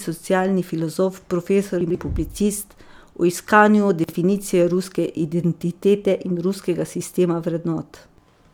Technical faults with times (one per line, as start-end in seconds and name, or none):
1.81-1.95 chunks out of order
4.04-4.13 chunks out of order